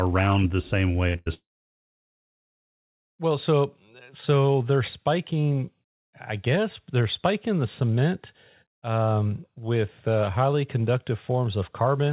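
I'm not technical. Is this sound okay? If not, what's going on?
No, it isn't quite right. There are a couple of network hiccups early on.

First, two bursts of packet loss, right back to back: one at 1.08 to 1.16 s and another at 1.16 to 1.28 s. Small chunks of the call audio never arrived in time, so the receiving end stretched out the last bit of speech it had, fading it as a short buzz or hiss. When the speech picks up again, those fractions of a second, about 60 ms and then 100 ms, are simply gone.

Then, from 1.34 to 3.11 s, there's what is likely a long network dropout. Nothing came through for almost two seconds. You get a brief fading buzz or hiss at the start, and then it's basically silent for most of that stretch before the speech comes back. Whatever was said during that gap is lost for good. It sounds like a connection that briefly cut out rather than anything wrong with the recording itself. 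The whole thing has that slightly muffled phone-call quality, since the call path drops everything above about 4 kHz.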